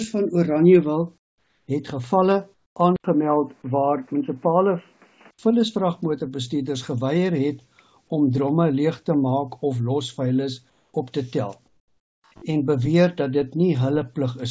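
Comfort noise in place of the background appears at 1.18 to 1.68 s and 2.54 to 2.76 s. In these pauses the real background gives way to a flat, featureless hiss. It sits about 8 to 9 dB lower. The likely cause is discontinuous transmission, with the receiver filling the gaps with synthetic noise.

From 2.96 to 5.39 s the input seems switched to a poorer device. An 80 ms silence marks the switch. Nothing passes above 3 kHz, so the sound turns dull and boxy. The level stays roughly the same, with a new noise floor well below it. A likely cause is a fallback to a headset call profile.

Comfort noise returns at 10.70 to 10.94 s and 11.68 to 12.24 s. The background again turns smooth and lifeless, dropping about 4 dB and then about 10 dB. Outside the switched section, the band reaches 8 kHz, which fits a wideband call codec.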